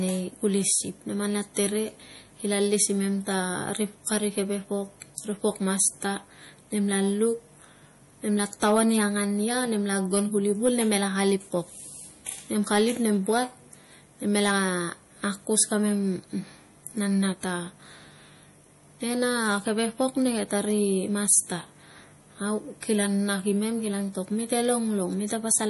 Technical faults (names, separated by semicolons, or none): MP3 compression